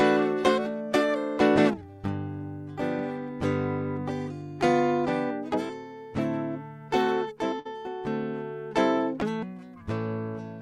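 At 7.59 s the music breaks up in a burst of packet loss lasting until about 7.67 s. Several packets in a row failed to arrive in time to play. The receiver filled about 56 ms by repeating the last bit of sound and letting it fade. So the music briefly smears into a held, fading sound. When playback resumes, about 60 ms of the music is missing, and the line jumps forward.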